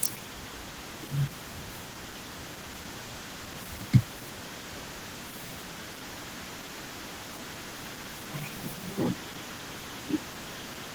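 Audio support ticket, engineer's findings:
Opus voice compression, throughout: hybrid mode at a rate that points to about 16 kbps. Coarse SILK excitation gives plainly audible hoarse, slightly robotic speech; CELT layer keeps the band open to about 20.5 kHz.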